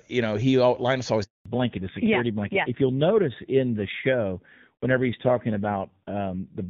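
At 1.24 s the speech stops dead in a handover gap: the call was moved between networks and no speech frames arrived while the switch happened, so the sound fades within a few tens of milliseconds and stays silent for 220 ms, until 1.46 s. Unlike a packet-loss dropout, there is no concealment buzz or repeated fragment. The audio simply goes quiet for one stretch and then resumes on a different link.

From 1.46 s to the end, a fallback to narrowband takes over. Before the gap, the AMR wideband (HD Voice) codec carries clean, full-bodied speech with at most faint coding damage, consistent with its top rate of about 23.85 kbit/s. Afterwards nothing is left above 4 kHz, and the speech turns muffled and rougher, which points to an older AMR narrowband rate near 7.4 kbit/s. The change is a permanent step at the handover, not a gradual filter sweep, and that marks it as a codec switch rather than equalisation.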